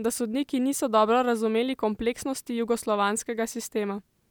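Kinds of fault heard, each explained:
No technical faults detected on listening; nothing to flag.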